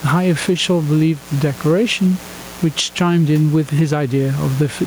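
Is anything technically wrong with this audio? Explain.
Yes, there are two problems, and both run the whole length of the clip.

The first is mains buzz, present from start to finish. It's a steady, raspy buzz sitting roughly 25 dB under the speech. It's built on 60 Hz, with harmonics stacking up into the kilohertz range. That gritty edge comes from sharp spikes getting into the signal twice per mains cycle, the sort of thing a dimmer, a rectifier or a missing shield lets through.

The second is gain pumping, also throughout. The level moves by around 10 dB, so loud and quiet parts end up squeezed together and the speech sounds squashed. The likely cause is gain cranked far too high at the mic, with a fast limiter or compressor clamping down on every peak. The room noise sits about 30 dB below the speech and is simply part of the recording.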